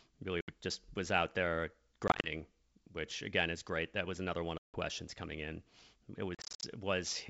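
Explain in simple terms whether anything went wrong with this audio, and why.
Packets of the call were dropped on the way, which is packet loss on an ADPCM call. Each gap is filled with silence, and the receiving decoder loses track of the sender's running estimates, so the speech comes back slightly distorted before settling. Holes fall at 0.41–0.51 s, before "just was out there", at 2.08–2.29 s after it, at 4.58–4.78 s between "was another one of" and "coming in", and at 6.35–6.65 s, the last and longest, broken up into several short gaps.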